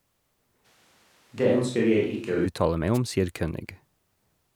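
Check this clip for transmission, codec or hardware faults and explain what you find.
Two faults stand out in this speech recording: a stretch that sounds like a distant microphone, and a brief wireless dropout.

Switch to a distant microphone, 0.66 s to 2.45 s. The voice abruptly turns roomy and hollow, thinner in the low end and roughly 5 dB quieter, with background noise rising to about 40 dB below the speech. The likely cause is that the close microphone dropped out and the mix fell back to one further from the talker, which picks up more room reflection and ambient noise. At 2.45 s the close, fuller sound snaps back.

Wireless microphone noise hit, 2.94 s to 2.98 s, just before "om sier". A short swish of static, about 50 ms long. This is an analogue FM radio link fading as reflected signal paths cancel one another. When the received signal weakens, the receiver's own noise rises to the surface, producing this quick burst before the signal recovers.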